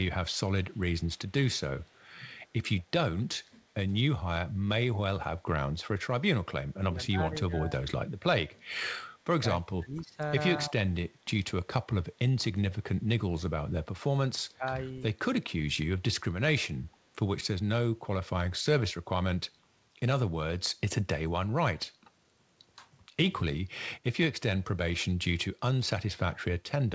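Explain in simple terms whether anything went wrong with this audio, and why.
Two things go wrong in this speech recording, both typical of a phone or video call.

Echo leak: at 0.71 to 1.32 s, 1.79 to 2.03 s and 2.79 to 2.83 s, a faint second copy of the speech trails the original by about a quarter of a second (225 ms). This is likely because the far end played the call through a loudspeaker and its echo canceller failed to remove everything its microphone picked back up, so some of that sound returned down the line.

Speech suppressed in double talk: at 6.91 to 7.81 s, 9.57 to 10.18 s, 10.69 to 10.73 s, 12.4 to 12.96 s and 14.54 to 14.99 s, the talker suddenly gets quieter or partly drops out for a moment. The likely cause is both sides speaking at once: the echo canceller cannot tell the talker apart from loudspeaker echo, so it turns everything down.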